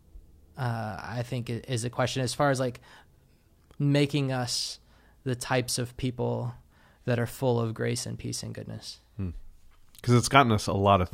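It's a speech clip with one corrupt FLAC frame at 1.28 s, just before "is the question as": a quiet error around -41 dBFS from garbled prediction, confined to what sounds like a single frame.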